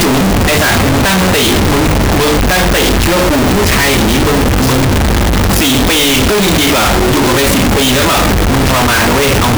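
Throughout, float read as integer: the speech was likely written as 32-bit floats but read as 32-bit integers, so sign and exponent bits set each sample. The waveform turns nearly square at an almost fixed, high level, very loud, harsh, background noise matching speech, pitch followable.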